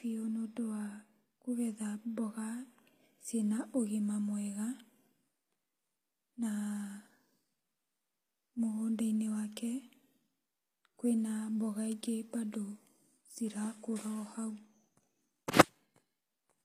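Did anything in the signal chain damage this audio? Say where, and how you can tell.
Yes: the speech's s sounds are gritty and lispy throughout, with nothing above 15.4 kHz. This is likely HE-AAC compression at the codec stage, where treble is rebuilt from copied lower bands.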